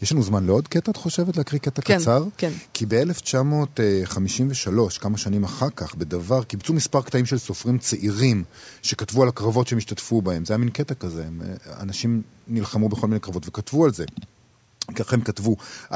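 Echo leak at 2.31 to 2.37 s and again from 8.44 to 8.72 s: a very faint, delayed copy of the speech trailing about 226 ms behind. The likely cause is a far-end echo canceller letting loudspeaker pickup slip back into the call.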